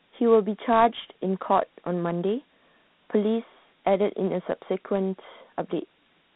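From start to finish the speech sounds thin and boxed in, with a gritty hiss that rides along with every syllable and falls back in the pauses. This is Dialogic VOX ADPCM damage: each sample is stored as a 4-bit step from a predicted value, which fits 8,000 samples a second at 32 kbps, and those coarse steps leave plainly audible grain. The band runs only from about 150 Hz to 3.7 kHz, with nothing above 3.9 kHz.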